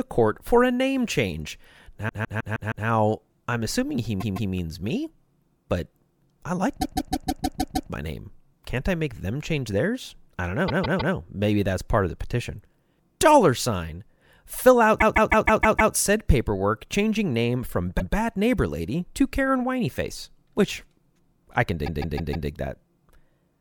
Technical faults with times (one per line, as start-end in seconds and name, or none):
2.08-2.86 repeated frames
4.19-4.51 repeated frames
6.81-7.90 repeated frames
10.67-11.14 repeated frames
14.98-15.92 repeated frames
17.99-18.14 repeated frames
21.85-22.48 repeated frames